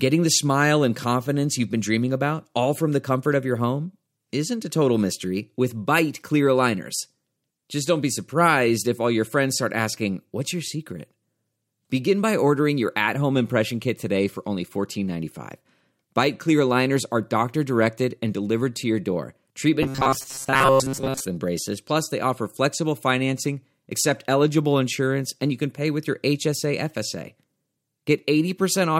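From 19.83 to 21.25 s the speech collapses into a rigid, metallic buzz near 134 Hz that still loosely tracks the words. This is robotic sound from repeated short buffers, likely caused by a stalled stream looping roughly 7.5 ms chunks, with most real audio skipped.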